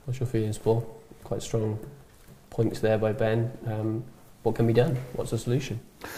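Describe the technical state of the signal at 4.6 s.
At 4.6 s the signal is intact, with no dropout, click, distortion or other fault audible at that moment.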